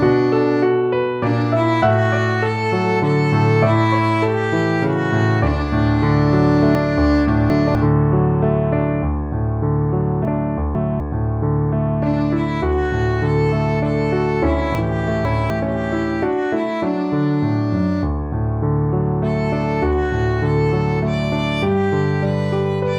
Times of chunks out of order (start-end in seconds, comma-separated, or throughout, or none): 6.75-7.75, 10.25-11.00, 14.75-15.50